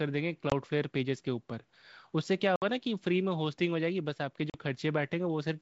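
At 0.50–0.53 s, 2.56–2.65 s and 4.50–4.56 s, packet loss on the ADPCM call cuts hard silent gaps of 20, 60 and 40 ms into the speech. Unlike a plain dropout, each return comes back slightly distorted while the mismatched predictor and step size resettle over tens of milliseconds.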